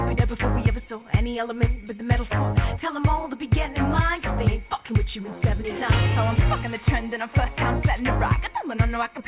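Nothing stood out as a fault on listening; the audio carries the narrow telephone band of a G.711 call path, with nothing heard above 4 kHz.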